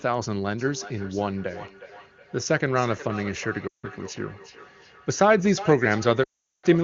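A second device in the same room is replaying this call, and its output leaks back into the microphone, so from 0.59 s to the end there is feedback echo between two devices. The sound returns roughly every 0.4 s, thinner and ringing, peaking at about 15 dB below the direct speech.

From 3.68 to 3.86 s, and again from 6.23 to 6.66 s, lost AMR speech frames force the wideband (HD Voice) decoder to extend its last good pitch and spectral settings at falling gain. The sound drops to near silence within two frames, then returns weak and rough. The 160 ms gap fits about eight 20 ms frames, and the 400 ms gap fits about twenty.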